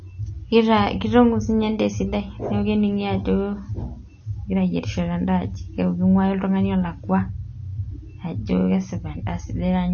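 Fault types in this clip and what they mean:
MP3 compression: The speech has nothing above 6.6 kHz, so the treble stops at a hard ceiling. The damage is plainly audible. Weak frequency detail flickers in and out between frames, giving a watery, swirly texture. S sounds turn metallic and chirpy, and consonant attacks smear. The likely cause is an MP3 encoder short of bits, cutting the top band and zeroing quiet lines. The sound points to a low bitrate, roughly 34 kbps.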